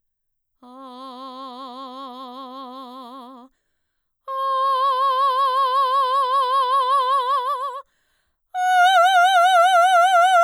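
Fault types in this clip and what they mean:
Hard clipping: near the end of the music, from 9.59 to 9.80 s, the signal reaches about 1 dB beyond the largest value some stage in the chain can pass, so the tops of its peaks are sliced off flat for roughly a fifth of a second. Those squared-off peaks add harmonics high in the spectrum, and with so slight an overload they show as a brief crackle on the loudest moments rather than a sustained fuzz.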